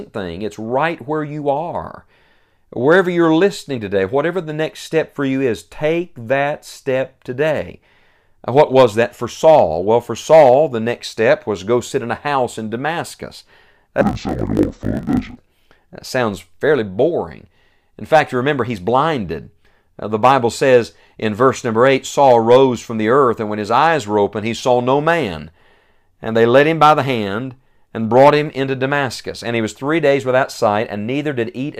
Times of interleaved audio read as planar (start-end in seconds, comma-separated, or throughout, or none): 14.01-15.38